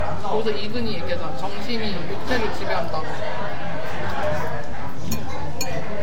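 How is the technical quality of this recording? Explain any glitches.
The recording has two faults, both present for its full length.

The first is a DC offset. The whole waveform sits shifted away from zero by a constant amount, so it no longer swings evenly around the centre line. This cannot be heard as a tone, but it eats into headroom on one side, making that side clip earlier. It also appears as steady energy at the very bottom of the spectrum, which a meter or analyser will show as a fixed shift.

The second is transcoding between lossy codecs, and the likely cause is that the audio was encoded more than once at low quality. The layered artefacts point to a very low-rate HE-AAC stage followed by re-encoding in Vorbis at a modest rate. The second encoder wastes bits reproducing the first one's damage and adds its own artefacts. Both sets of artefacts are heard together throughout, and nothing survives above 16.3 kHz.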